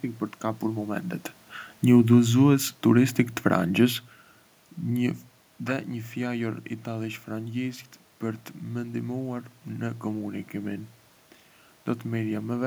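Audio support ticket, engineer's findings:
Speech level sinks steadily 1.87–4.0 s, room background sinking with it, about 4 dB down by the end. Automatic gain falling: the AGC judged the input too loud or its background noise too strong and lowered its gain gradually. Level shifts around half a second and around 5 s come from the talker moving relative to the mic, and room noise is present throughout. Neither is a system fault.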